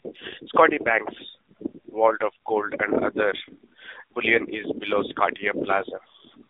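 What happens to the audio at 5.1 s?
Right after "bullion is below", from 5.12 to 5.24 s, the voice turns hoarse, scratchy and gargly. These are AMR bit errors. Over those 120 ms, about six 20 ms frames, a few percent of the less protected bits arrived flipped while the check on the core bits still passed. The decoder placed its excitation pulses wrongly and mis-set fine gain and spectral values. It differs from a dropped frame, which would mute or smear into a repeat: here pitch and loudness carry on, only roughened. The burst sits on top of the AMR narrowband mobile codec damage that runs through the whole clip, at 7.4 kbps within a 300 Hz to 3.7 kHz band, which gives the voice its buzzy, synthetic quality.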